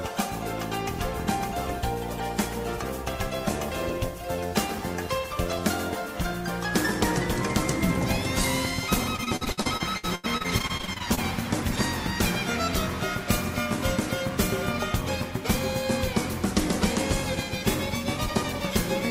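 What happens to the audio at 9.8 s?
Repeated packet loss (robotic sound) runs from 9.16 s to 11.19 s, so 9.8 s falls inside it. Over this stretch, pieces of the stream go missing again and again, around twenty separate holes, the longest about 82 ms. Each is patched by extending the last sound, totalling about 600 ms, roughly 30% of the span. The constant patching leaves the audio choppy, with a robotic texture and fragments missing.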